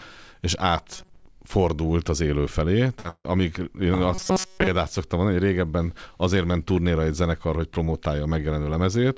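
From 0.93 to 1.26 s, just before "fordult az élő felé", the speech turns into a stiff metallic buzz at about 188 Hz: robotic sound from repeated short buffers. The likely cause is audio arriving too slowly, so the playback loops a roughly 5 ms chunk over and over, which sets that fixed pitch. Most of the stretch is repeats rather than real audio. The same buzz returns from 4.15 to 4.68 s, between "én ah" and "szoktam mondani hogy régebben".

At 3.00 to 3.06 s there's a short concealed packet loss. About 40 ms never arrived, and the decoder papered over it with 44 ms of continued sound, so you hear a quick smear.

Right after, from 3.10 to 3.26 s, comes a burst of packet loss between "fordult az élő felé" and "én ah". About 140 ms is gone. The receiver stretches the last sound for around 135 ms and lets it fade, including about 50 ms of near silence, and then the speech jumps ahead. The G.722 call path is working normally, and nothing comes through above 8 kHz.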